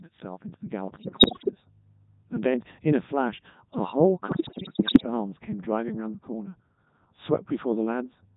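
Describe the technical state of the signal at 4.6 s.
Bit errors on digital voice radio run from 4.32 to 5.06 s, so 4.6 s sits in the middle of the burst. Around one bit in seven arrives flipped. In a vocoder this lean, every bit steers the pitch, loudness, voicing or spectral shape of an entire frame. Corrupted frames are rebuilt with wrong parameters, and the synthetic voice lurches in pitch and level, changes tone colour abruptly, and dissolves into bleeps, warbles and robotic gibberish.

That burst lands on top of the Codec 2 vocoder, which colours the whole clip and at this point sounds like the 3.2 kbit/s mode. Only pitch, voicing, energy and a coarse spectral envelope pass through. The decoder resynthesises the voice from sine waves rather than keeping the original waveform. The damage is heavy, leaving the speech robotic and buzzy, with a flat, synthetic edge. Anything beyond a single voice gets smeared or mangled.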